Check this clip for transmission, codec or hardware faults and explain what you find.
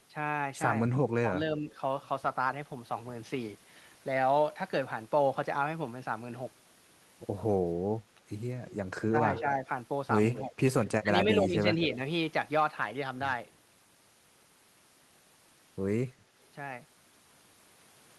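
Two faults are present in this speech: short bursts of echo leak and intermittent speech suppressed in double talk, both in the 8.7 to 12 s region.

Echo leak occurs at 8.71–8.75, 9.36–9.41, 10.34–10.48 and 10.85–10.91 s. It is a copy of the voice trailing by 236 ms, sitting roughly 10 to 25 dB below the speech. The likely cause is a far-end loudspeaker whose echo canceller let some residual echo through.

Speech suppressed in double talk affects 9.09–9.68, 10.49–10.53 and 11.02–11.99 s. The voice dips in brief pieces, by up to about 10 dB, while the other side talks. This is likely an echo canceller that could not separate the talker from echo and attenuated both.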